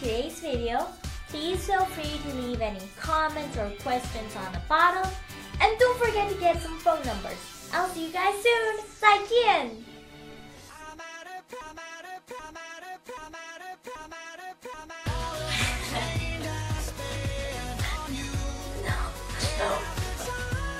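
At 11.61 s the sound locks into a broken-record loop. A 0.78 s fragment repeats exactly, back to back, four times, until 15.06 s. The player, encoder or stream likely stalled and kept resending its last fragment. The audio meant for that stretch is lost.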